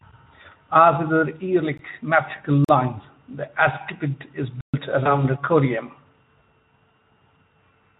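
Speech passed through a Speex voice codec, with only light coding texture, contains three blocks of digital silence: a 17 ms dropout at 1.78 s, a 43 ms gap from 2.65 to 2.69 s that fits a 2048-sample buffer, and a 128 ms hole from 4.61 to 4.74 s, each cutting hard to silence. VoIP packet loss concealed by the speech codec follows at 5.04 s, where a single lost 20 ms frame is bridged by extrapolated, fading sound, and the decoder's state stays disturbed until about 5.24 s.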